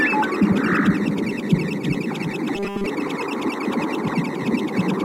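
From 2.56 to 2.86 s the sound hardens into a rigid, metallic buzz fixed at 200 Hz. This is robotic sound from repeated short buffers, likely caused by audio arriving too seldom, so a segment of about 5 ms was looped to fill most of that span while the real audio was skipped.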